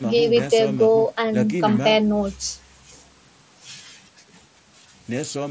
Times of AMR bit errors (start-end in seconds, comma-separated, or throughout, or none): none